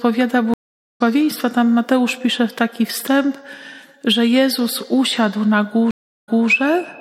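There are two stream reconnects. At 0.54 s the audio drops out for 0.38 s, then a fresh decoder picks up about a fifth of a second further on. At 5.91 s, 0.29 s of silence ends with the sound jumping back 0.29 s and repeating itself.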